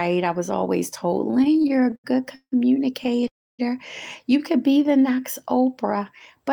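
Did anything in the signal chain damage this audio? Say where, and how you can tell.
Yes. The damage sits in the network stage and the receiver's jitter buffer of a call path.

Repeated stalls (stutter) make the speech judder and drag from 1.31 to 2.54 s, where 17 brief holds fill about a third of the span, the longest 169 ms. A second, lighter burst of six tiny holds runs from 3.04 to 3.28 s. Packets were arriving late, so the buffer kept emptying and the receiver stretched the last sound each time rather than dropping anything.

A call audio freeze follows at 3.28 s. The sound halts and falls almost entirely silent for about 0.3 s, then resumes at 3.61 s exactly where it stopped, pushing everything after it 310 ms later. The likely cause is packets held up in transit, leaving the jitter buffer with nothing to play.

A jitter buffer slow-down stretches the speech from 4.57 to 5.22 s. It plays at 88% speed with unchanged pitch and sounds slightly drawn out, adding 86 ms. 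The receiver was rebuilding its reserve by repeating single pitch periods in a row.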